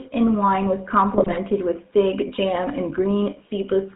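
From start to finish the speech carries the buzzy, gravelly roughness of the GSM full-rate codec, which fits the 13 kbps full-rate coder. It rebuilds the voice from a vocal-tract model excited by evenly spaced pulses, so much of the fine excitation detail is lost and the damage is plainly audible. On a spectrogram the energy sits inside a band from 150 Hz to 3.6 kHz, with nothing above. Harmonics look smeared and grainy rather than cleanly striated.

Between 1.16 and 1.38 s GSM bit errors break through. Corrupted filter, pitch and gain values reach the decoder, which fits an error rate of a couple of percent on a weak link. Each damaged frame is decoded with a warped spectrum or an inflated level, so the voice squawks, pops and gargles. The waveform shows abrupt amplitude jumps in short blocks, and the spectrogram shows vertical slabs of misplaced energy that break the formant tracks.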